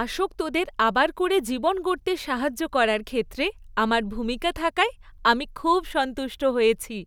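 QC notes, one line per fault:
Nothing stood out on listening to this speech clip.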